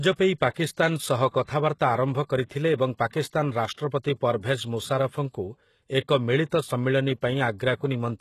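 Across the whole speech clip, the treble sounds synthetic. Nothing is present above 12.3 kHz. S sounds come out gritty and metallic. This is likely HE-AAC compression, which fits a low bitrate near 16 kbps. The upper band is rebuilt from copied lower bands, so its harmonics don't line up with the real ones.

At 0.50 s, a short hiss arrives before a sharp onset and lasts about 59 ms, to 0.56 s. This is pre-echo. The codec spreads its noise over a whole block, so noise meant for the attack leaks into the quiet moment before it. It happens again from 3.10 to 3.13 s, a 30 ms smear.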